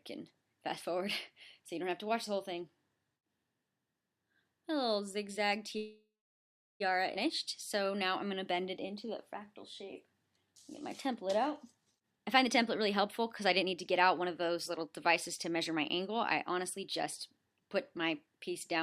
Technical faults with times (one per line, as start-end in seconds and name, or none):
5.77-6.82 call audio freeze
7.14-7.17 skip ahead
7.75-9.87 jitter buffer slow-down
10.29-11.97 jitter buffer slow-down
12.01-18.36 jitter buffer speed-up